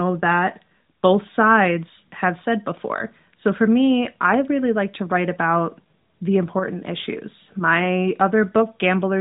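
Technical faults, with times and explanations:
No technical faults are present in this speech clip. It passes through the AMR narrowband mobile codec with nothing above 3.8 kHz and only light codec colouring, which fits its 12.2 kbps mode.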